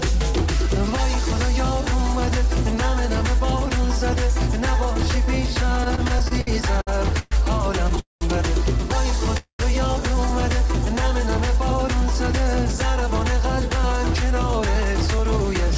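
From 5.84 to 7.99 s there's a repeated stall, a stutter: ten short gaps (longest 121 ms, about 354 ms in all) where the jitter buffer ran dry and the receiver stretched the last sound, so the audio drags and hiccups. Right after, from 7.99 to 8.23 s, comes a call audio freeze, likely from packets held up in transit. A 220 ms gap gets inserted, with the held sound fading into about 160 ms of silence before things pick up where they stopped. A second freeze hits from 9.37 to 9.61 s, again 220 ms, likely from the same kind of delivery delay, this time with about 100 ms gone fully silent. Throughout, the G.722 call codec leaves nothing above 8 kHz.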